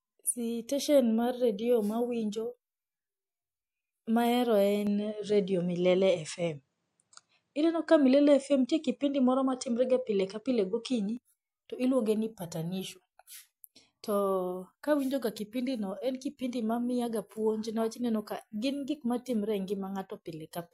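From 4.87 s to 11.17 s the speech turns duller, with nothing above 9.6 kHz, a level shift of a few decibels and a faint new noise floor well below the voice. There is no gap at either change. The duller sound begins just before "to iluonge ni patanisho". This is likely an input switched to a poorer device. On a spectrogram the top band is cut flat at 9.6 kHz between those times, and the waveform steps in height at each edge.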